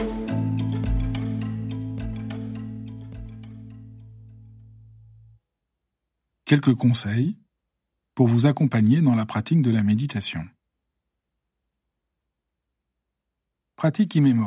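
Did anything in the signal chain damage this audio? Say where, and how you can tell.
No, there is no sign of damage from any stage of the signal chain anywhere in this audio.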